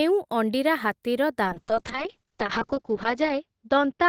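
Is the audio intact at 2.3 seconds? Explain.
No. At 2.3 seconds the speech sits inside a call bitrate drop that begins at 1.45 s and runs to the end of the clip. The encoder's rate falls from 32 kbps to 6 kbps and stays at that floor for about 1.4 s. At that rate Opus quantises coarsely and narrows the coded band from 20 kHz to 8 kHz. The result is speech that sounds muffled, rough and watery rather than clean.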